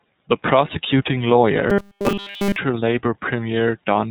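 From the very start the speech runs through the iLBC codec, and the damage is plainly audible. Nothing gets through above about 4 kHz, so it sounds narrow and a bit rough and synthetic. That fits iLBC's 30 ms frame mode at 13.33 kbps, where each frame's excitation is coded on its own.

From 1.70 to 2.57 s it goes robotic, a stiff metallic buzz at 200 Hz that still roughly tracks the speech. The likely cause is repeated short buffers: a 5 ms chunk looped over and over while the real audio in that stretch is essentially all skipped.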